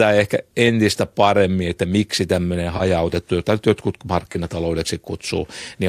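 At 2.77 to 2.82 s, right after "paremmin että miksi tämmöinen", and again at 4.32 to 4.37 s, after "jota nyt jotkut", there is AAC frame loss with concealment. About 30 ms of audio goes missing each time, which fits three lost frames. The decoder patches each gap from the preceding spectrum, so it sounds like a brief smeared, phasey blur. Unlike a plain dropout, it does not fall to silence or click, and the light graininess around it is likely from low-delay AAC coding.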